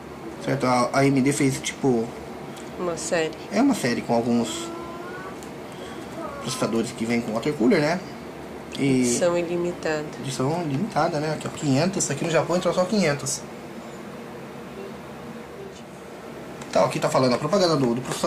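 No technical faults can be heard anywhere in the recording.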